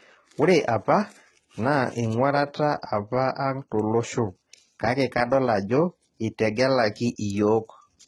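A speech clip that was likely squeezed through HE-AAC compression at a very low rate, one that fits something near 16 kbps, for its whole length. The codec spends its few bits on the lower spectrum and synthesises the treble with spectral band replication, copying lower bands upward under a coarse envelope. That treble is not the original, so harmonics misalign across the crossover, and s sounds come out gritty, metallic or lispy. The damage is heavy, and nothing survives above about 11.8 kHz.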